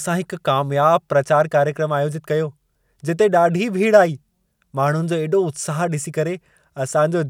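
No technical faults occur at any point in the recording, so there is nothing to describe in time order.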